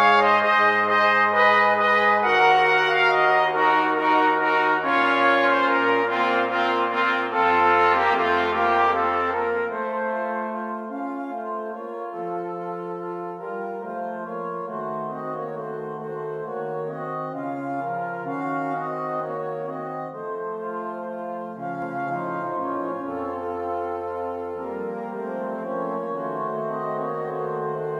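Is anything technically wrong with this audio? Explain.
Yes. From about 21.82 s to the end, there's a doubled audio track: a second, equally loud copy lagging roughly a third of a second, dry and full-band, kicking in abruptly. It's likely a slower second capture path or two out-of-step copies in an edit.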